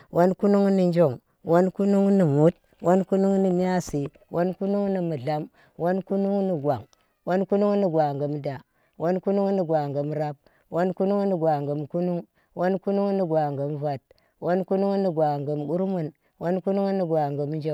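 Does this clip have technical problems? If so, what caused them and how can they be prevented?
No, nothing in this recording points to a technical fault, so there is nothing here to trace to a cause or to prevent.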